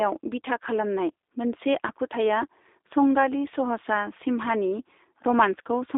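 Throughout, G.729 coding, consistent with 8 kbit/s, rebuilds the speech from a model, sounding rough and synthetic. The spectrogram holds energy between 300 Hz and 3.7 kHz.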